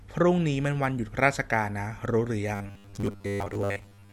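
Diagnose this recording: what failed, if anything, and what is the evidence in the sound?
From 2.55 s to 4.12 s the speech becomes a rigid metallic buzz at 100 Hz, the robotic sound from repeated short buffers. The likely cause is a starved driver buffer replaying a 10 ms block for most of that span. A spectrogram shows flat harmonics every 100 Hz, and the waveform shows identical repeating cycles.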